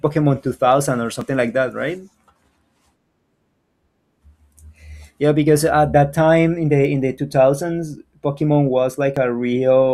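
At 1.21 s the speech jumps where a few milliseconds of audio, about 4 ms, simply vanish. This is an overlap between stream segments. Two adjacent segments claimed the same stretch of time, and the player trimmed the overlapping portion even though the content was not actually duplicated, leaving a discontinuity in the waveform. The same tiny skip recurs at 5.19 s, 7.18 s and 9.17 s, each removing roughly 4 to 7 ms. The spacing falls on a 2-second grid, matching the segment length.

At 6.85 s there is a single sharp tick, a bit error spike. One sample had a bit flipped somewhere in storage or transmission, so its value leapt by a power of two and immediately returned. Confined to that one sample, the spike is broadband and has no relation to the surrounding speech.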